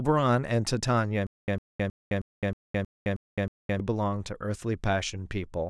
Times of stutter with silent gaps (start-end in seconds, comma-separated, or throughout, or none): 1.27-3.80